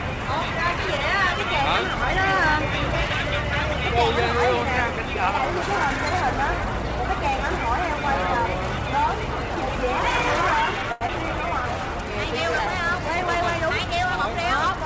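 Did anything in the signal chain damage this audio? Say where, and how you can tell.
Yes. The damage comes from network delivery and the receiver's jitter buffer, not the converters or wiring.

At 10.92 to 11.03 s a short stall from a late packet holds the current sound for 89 ms, sometimes with a slight buzz or dip, then resumes from exactly where it paused. Because nothing is skipped, this is a delay rather than a loss.

At 11.07 to 11.10 s there is short concealed packet loss. About 40 ms never arrives, and 13 ms of extrapolated sound bridges the gap as a brief smear or wobble. Unlike the stall just before it, material is actually missing and playback jumps ahead.

From 11.13 to 11.79 s a jitter buffer slow-down plays the sound at 94% speed by repeating pitch periods, adding 41 ms to rebuild the reserve. The pitch stays put, which rules out a clock or sample-rate mismatch.

From 13.84 to 14.80 s a jitter buffer speed-up trims roughly 40 ms by dropping short pitch periods, running at 103% speed. 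The pitch is again unchanged, so the content runs faster rather than raised. The codec's top end stopping at 8 kHz is consistent with the call path, not damage.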